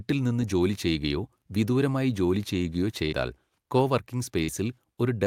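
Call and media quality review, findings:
Burst of packet loss, 3.05–3.14 s, right after "ചെയ്യുകയോ വിദൂരമായി ജോലി ചെയ്യുകയോ": last sound extended about 66 ms and faded as a held buzz or hiss, then speech resumes with about 60 ms skipped. Network path; receiver concealment covering consecutive lost packets.

Short concealed packet loss, 4.44–4.50 s: brief smear or wobble where about 40 ms of audio is missing and about 42 ms is synthesized from the preceding sound, then cross-faded back. Network jitter or drop; decoder loss concealment.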